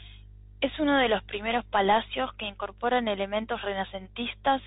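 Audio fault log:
Throughout: Bluetooth CVSD headset codec. The speech is band-limited with nothing above 3.8 kHz, giving the boxed-in narrowband sound of a headset link. The coder sends a single up-or-down bit per sample, which fits a 64 kbps CVSD stream, and adapts its step size. Fast, loud high-frequency movement outruns that step, so sibilants turn scratchy and a granular hiss sits under the speech; the codec damage is plainly audible.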